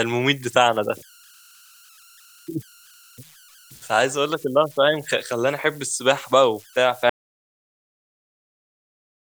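A faint whistle around 1.5 kHz, about 29 dB below the speech, runs throughout. These are converter idle tones from an undithered delta-sigma converter cycling through repeating bit patterns. At 7.1 s the speech cuts to dead silence with no room tone until the end, an audio dropout to silence, likely from the input being lost while silence was recorded.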